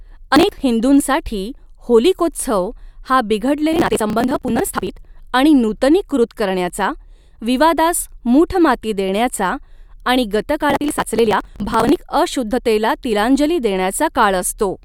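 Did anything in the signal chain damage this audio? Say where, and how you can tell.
Yes. Processor overload crackle, from the driver or buffer stage, tears through the speech at 0.36–0.62 s, 3.73–4.89 s and 10.70–11.97 s. Roughly 30, 100 and 100 buffers of about 10 ms missed their deadlines and were skipped outright, leaving hard-edged gaps that fuse into gritty crackle until the load eases.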